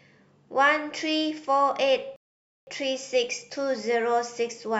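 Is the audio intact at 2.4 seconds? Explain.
No. At 2.4 seconds the speech sits inside a rebuffering stall that runs from 2.16 to 2.67 s. The player exhausted its downloaded audio and halted playback until more data arrived, so the sound drops to silence for about 0.51 s, then picks up at exactly the point where it stopped. No speech is missing; the stall only inserts dead time, stretching the timeline by that half second.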